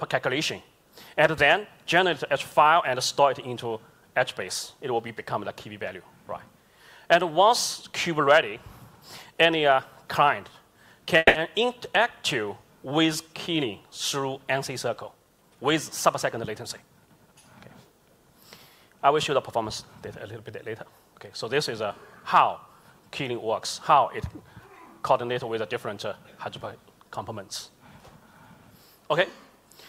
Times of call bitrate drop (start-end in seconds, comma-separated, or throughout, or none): none